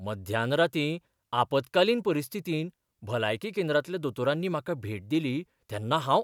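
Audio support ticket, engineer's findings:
No faults found on listening to the speech recording. No working path to report beyond the recording itself, which shows no audible artefacts.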